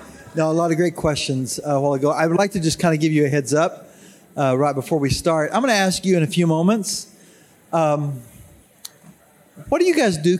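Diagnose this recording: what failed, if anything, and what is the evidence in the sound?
Nothing failed in this recording, and the sound gives no evidence of any fault.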